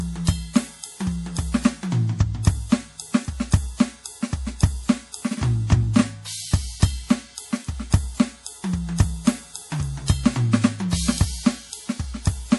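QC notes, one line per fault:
throughout MP3 compression: likely bit-starved encoding, fitting about 48 kbps, removes everything above 11.5 kHz and flickers weak detail, leaving the music dull and watery.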